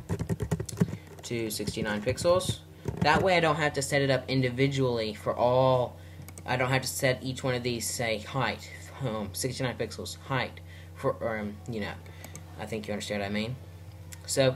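No technical faults can be heard anywhere in the audio.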